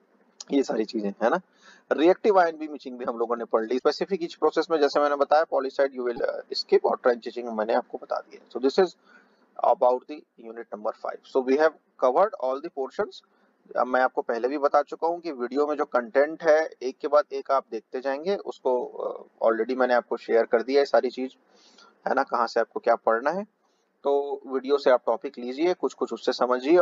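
At 3.75 s and again at 6.13 s there's a short burst of damaged data in the compressed stream, each lasting about 70 ms. A stretch of the coded file was corrupted, so the decoder couldn't make sense of those frames, lost sync and had to hunt for the next valid frame header before it could carry on. You hear each one as a quick glitch, a chirp, squawk, click or short hole, cutting across the sound.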